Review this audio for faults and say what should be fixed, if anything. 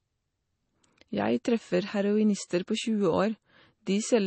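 Throughout the speech the treble stops dead at about 8.3 kHz, and the remaining sound has a watery, swirling texture, with s sounds chirping and consonant attacks smeared. This is likely MP3 compression at a rate that fits roughly 32 kbps: the encoder ran short of bits, cut the top band and dropped weak frequency lines that flicker in and out between frames. A simple low-pass filter would dull the sound without that swirl. To prevent it, encode from the original at a higher bitrate or use a lossless format.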